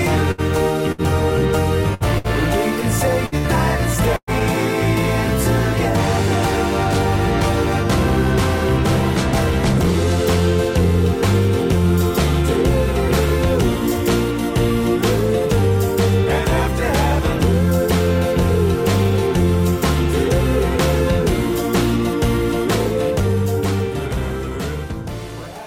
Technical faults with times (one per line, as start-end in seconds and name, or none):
0.31-0.41 burst of packet loss
0.92-1.01 burst of packet loss
1.94-2.27 burst of packet loss
3.26-3.47 burst of packet loss
4.16-4.30 burst of packet loss